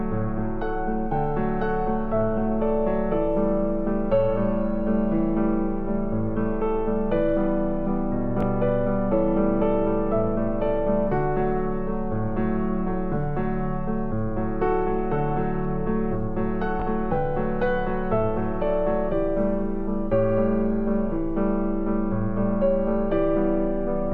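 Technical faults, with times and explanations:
8.41 s and 16.80 s, Bluetooth stutter: an 18.7 ms slice replays while data is missing, which fits one lost packet, then the sound resumes further on. The waveform shows a duplicated segment ending in a discontinuity, and the spectrogram shows a thin vertical seam.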